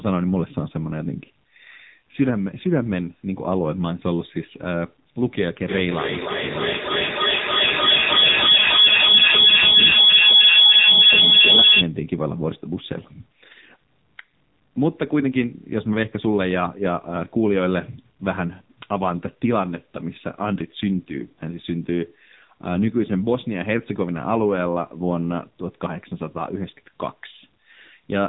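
Throughout the recording, the speech has passed through an AMR narrowband mobile codec running at a low bitrate, which fits its 6.7 kbps mode. Nothing above 3.8 kHz survives, and the heavy coding damage leaves the speech buzzy, muffled and synthetic.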